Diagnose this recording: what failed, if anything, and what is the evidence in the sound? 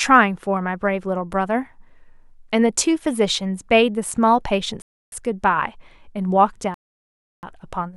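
The failure sits in the wireless playback stage, most likely a Bluetooth stall, where interference delayed packets until the headphones' buffer emptied and output halted until retransmissions arrived. The speech drops to dead silence twice: from 4.82 to 5.12 s, a gap of about 0.30 s, and from 6.74 to 7.43 s, about 0.69 s. Each time the sound stops abruptly and then resumes.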